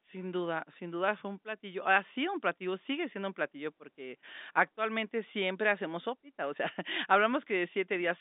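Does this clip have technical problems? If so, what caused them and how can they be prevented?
No, the speech is carried over G.711 A-law telephone coding at 64 kbps, which limits it to roughly the 200 Hz to 3.7 kHz line band with nothing above 3.8 kHz, as a normal phone line does, so there is no problem to prevent.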